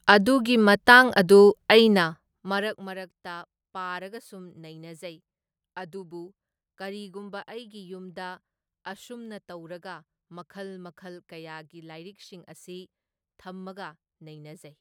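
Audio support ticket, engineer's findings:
Zipper noise, 1.84–3.00 s: fast ticking riding on the speech as the level falls by about 20 dB. Likely a gain stage stepping in 1 dB increments, around twenty steps a second, with no smoothing. Each step clicks.

Ticks track the level move and stop once it settles at 3.00 s, unlike steady crackle or dropouts.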